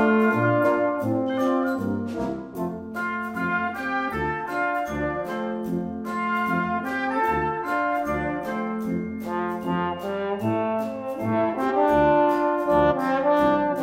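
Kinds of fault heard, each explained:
Compressed frames skipped: one or two 46.4 ms frames never reached playback, so the sound jumps ahead about 50 to 100 ms, at four points.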